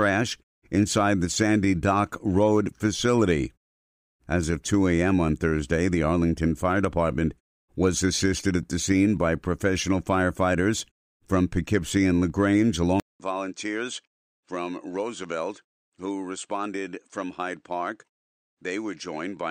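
Input switched to a poorer device at 13.00 s, lasting to the end of the speech. A gap of about 200 ms of silence marks the switch, after which the sound comes back roughly 10 dB quieter, duller and boxier, with nothing above 9.1 kHz and a new, faint background noise sitting about 55 dB below the speech. The likely cause is the system changing its input mid-recording to another microphone or a headset's call profile with a narrower band, its own tone and its own noise floor.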